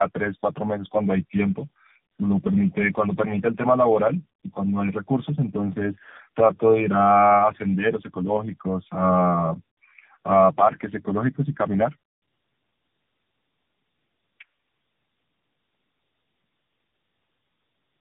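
Throughout this speech clip the sound is rough, muffled and warbly, with nothing above about 3.5 kHz. This is tandem speech coding: the audio was decoded and re-encoded at each link, and the degradation points to three successive low-bitrate AMR-NB passes compounding one another's errors.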